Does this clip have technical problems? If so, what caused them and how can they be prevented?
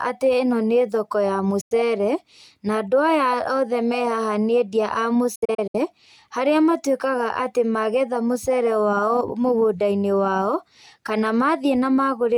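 Yes, there are digital broadcast dropouts. The receiver lost or rejected corrupted frames and muted, so the speech fades to silence at 1.61–1.72 s after "thoko ya", and breaks into several short holes at 5.35–5.75 s after "endia a". Stronger reception, a better antenna or more robust error protection would prevent this.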